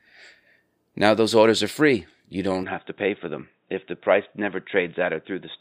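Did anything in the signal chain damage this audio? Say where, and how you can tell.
Yes. At 2.63 s the speech turns dull and narrow with no gap or level jump, and stays so to the end. Nothing remains above 3.8 kHz, and a faint new noise floor appears far below the speech. The input was likely switched to a poorer device.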